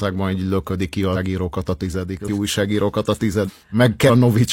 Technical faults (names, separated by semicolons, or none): compressed frames skipped